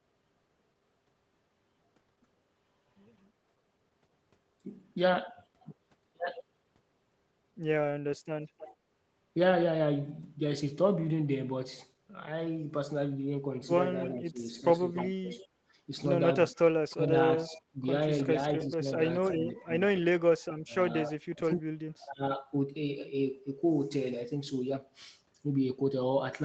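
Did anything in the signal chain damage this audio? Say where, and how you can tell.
Yes. A faint delayed copy of the speech trails the talker at 8.44 to 8.76 s, 14.01 to 15.47 s and 16.55 to 19.38 s. It sits about 15 to 20 dB below the direct sound and lags it by 309 ms. This echo leak likely comes from a far-end loudspeaker whose echo canceller left residual pickup that was sent back.

The talker's level dips and breaks up in pieces between 14.11 and 15.31 s, by up to about 30 dB over roughly half a second. It dips again between 16.5 and 22.22 s, by up to about 25 dB over roughly one and a half seconds. This is speech suppressed in double talk, likely caused by the call's echo canceller attenuating both sides while they overlapped.

The room background drops by about 15 dB from 15.59 to 15.73 s, for roughly 150 ms, then returns. This is background gated by the echo canceller. Just after the echo burst ends, the call-processing stage clamped the microphone path and released it a moment later.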